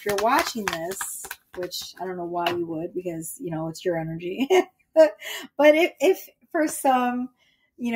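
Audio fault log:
Throughout: noise suppressor applied to music or sounds. A speech-tuned suppressor treats sustained tones and ambience as noise, so the level pumps by a few decibels rather than cutting cleanly.
1.29–1.58 s, 4.66–4.96 s, 6.27–6.54 s, 7.29–7.8 s: sound cut by the noise suppressor. Held or decaying sound sinks by about 18 to 20 dB for a fraction of a second, deeper than the overall pumping, while sharp onsets survive.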